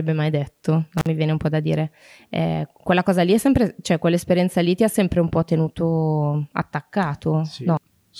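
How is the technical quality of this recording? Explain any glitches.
One glitch breaks the speech. Between 0.98 and 1.07 s, just after "mai detto" and before "viene un po' da", an intermittent contact makes the sound drop out for about 47 ms, crackling at both edges, as a loose cable or plug briefly opens the line.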